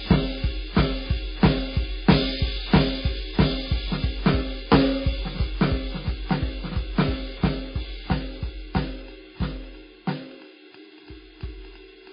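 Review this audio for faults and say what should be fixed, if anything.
The music sounds dull and smeared throughout, with nothing above 5 kHz and two layers of artefacts heard together. That's likely transcoding between lossy codecs. It fits a very low-rate MP3 near 16 kbit/s re-encoded to WMA near 64 kbit/s, where the second codec preserves the first one's damage and adds its own. Encode once, straight from the original master.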